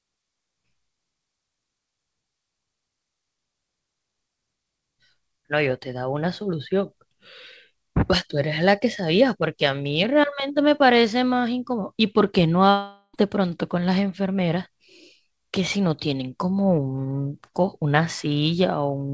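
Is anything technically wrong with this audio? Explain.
Yes, there's a gap in the speech from about 12.70 to 13.15 s that sounds like a long network dropout. Roughly 440 ms of audio just never shows up. The receiver likely kept extending the last sound for about 440 ms, which you hear as a fading buzzy tail, then a brief silence of about 20 ms before the speech picks up again further on. Whatever was said in that stretch is gone, not delayed. The audio has nothing above 8 kHz, which fits a G.722 call path.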